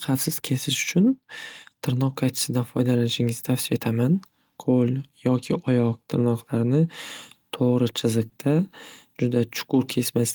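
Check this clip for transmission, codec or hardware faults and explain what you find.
One transmission fault is audible in the speech. Short concealed packet loss occurs at 8.29 to 8.33 s: about 20 ms of audio arrived too late for the decoder, so the receiver extended the preceding sound to cover the gap and then blended back into the real signal, leaving a brief smear or wobble.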